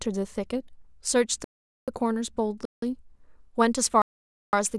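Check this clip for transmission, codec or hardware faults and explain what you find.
Three dropouts to digital silence interrupt the speech, at 1.44–1.88 s (0.43 s), 2.65–2.82 s (0.17 s, which fits a 4096-sample buffer) and 4.02–4.53 s (0.51 s). Each block of digital silence is most likely silence written when the output buffer wasn't filled in time. The hard cut in and out leaves an audible hole.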